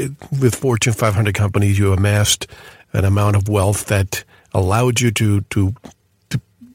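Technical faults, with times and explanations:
No technical faults detected.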